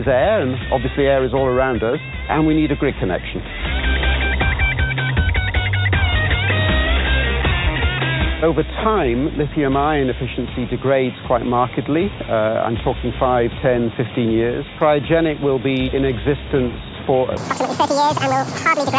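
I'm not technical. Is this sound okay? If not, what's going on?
No. From 17.37 s to the end at 18.98 s, the sound suddenly plays twice as fast and an octave higher. This is a wrong sample rate: it fits audio recorded at 8 kHz being played back at 16 kHz.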